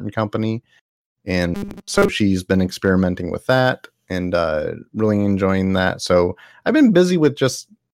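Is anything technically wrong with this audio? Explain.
Yes. From 1.55 to 2.09 s, before "she's been experimenting with", speech becomes a rigid metallic 200 Hz buzz, robotic sound likely from a repeated buffer of about 5 ms.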